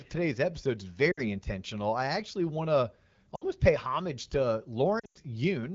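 Lost AMR speech frames: radio errors corrupted frames, so the wideband decoder reused its last good pitch and vocal tract settings at falling gain. Brief smeared dips come at 1.11–1.22 s and 3.36–3.44 s. At 4.99–5.18 s, scattered losses drop the sound to near silence within two frames before it returns rough.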